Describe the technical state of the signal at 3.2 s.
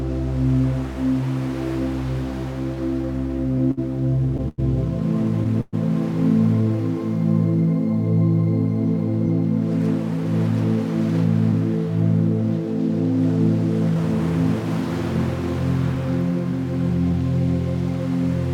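At 3.2 s the signal sits inside a run of repeated stalls (stutter) spanning 2.63 to 5.75 s. Packets arrived late, so the jitter buffer emptied twelve times; each gap, up to 119 ms, was bridged by extending the preceding sound, giving a dragging, stuttering texture without lost material.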